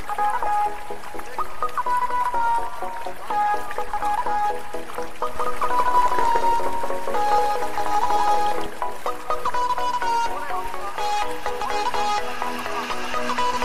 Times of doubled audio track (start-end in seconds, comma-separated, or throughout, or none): 5.36-8.66